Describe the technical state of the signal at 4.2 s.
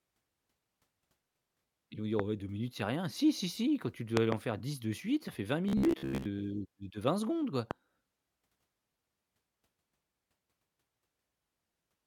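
A sudden voltage pulse, most likely from a plug, switch or static discharge, entered the signal path between 4.17 and 4.34 s. The result is a loud pop heard twice in quick succession, far louder than the speech, which continues underneath.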